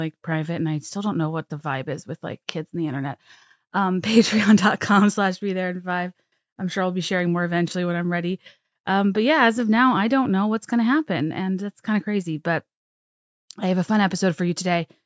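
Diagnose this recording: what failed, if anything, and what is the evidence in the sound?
Nothing stood out on listening to this speech recording, and no stage of the chain gave audible evidence of a failure.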